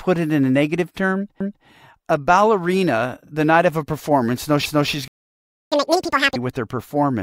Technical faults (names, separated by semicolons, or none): overlapping chunks; playback stall; catch-up at higher speed